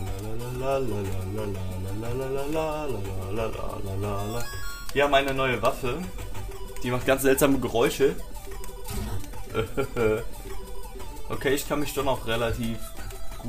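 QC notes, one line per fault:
No faults to note.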